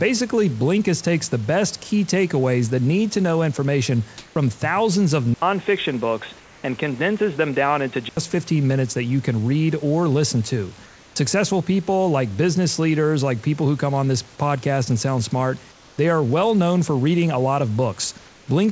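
A speech recording carried over a call path whose band stops at 8 kHz, which fits a wideband G.722-style codec. Five times the room background, normally about 29 dB below the loudest speech, gives way to a flat, featureless hiss: at 4.18–4.36 s (about 2 dB louder), and at 6.40–6.64 s, 10.86–11.16 s, 15.72–15.98 s and 18.18–18.48 s (about 2 to 3 dB quieter). This is comfort noise in place of the background, likely synthetic fill while the sender stopped transmitting during pauses. From 5.34 to 8.17 s the sound turns dull and boxy, with nothing above 3.8 kHz and a new noise floor roughly 30 dB down, after an 80 ms silence at the switch. The level stays the same, which points to the input switched to a poorer, narrower-band device. At 11.14 s speech resumes abruptly out of that synthetic noise, its first 20 ms missing. This onset was likely clipped by the voice detector, which reacted late, so the soft start was never sent.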